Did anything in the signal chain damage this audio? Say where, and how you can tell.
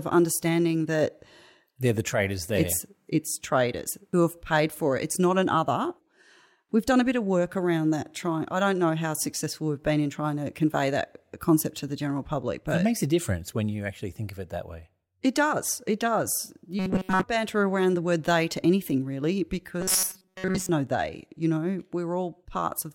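Yes: robotic sound from repeated short buffers, likely driver/buffer underruns replaying most of the audio as roughly 5 ms blocks. That imposes a rigid 188 Hz metallic buzz at 16.79–17.24 s, before "banter around the word", and at 19.81–20.69 s, after "they to anything really".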